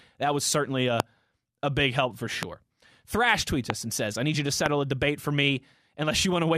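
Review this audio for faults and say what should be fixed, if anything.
Loud pops occur at 1.00–1.02 s after "was certainly", 2.43–2.45 s, 3.70–3.72 s and 4.66–4.68 s after "I need you to". Each is one sharp click, roughly 20 dB above the speech, which continues underneath. A brief voltage spike, likely from a connector or switch, is being added to the signal. Secure all cables and avoid switching equipment while recording.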